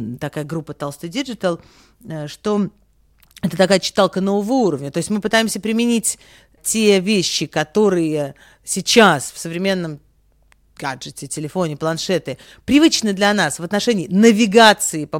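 No technical faults are audible.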